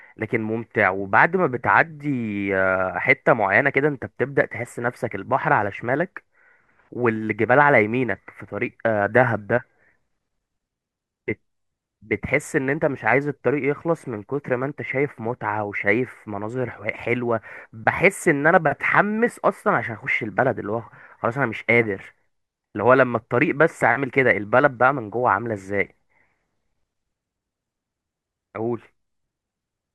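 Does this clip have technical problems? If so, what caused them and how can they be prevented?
No, nothing in this speech recording points to a technical problem, so there is no cause to trace and nothing to prevent.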